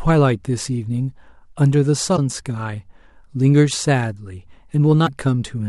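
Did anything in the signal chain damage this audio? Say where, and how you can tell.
Yes. Damaged data in a compressed stream, at the codec stage: corrupt bytes reached the decoder, which misread the affected frames, lost sync and had to hunt for the next valid frame header. In this speech clip that shows up as a brief glitch from about 2.13 to 2.19 s and a shorter one from about 5.06 to 5.09 s. Each is a short disruption that breaks abruptly into the surrounding audio.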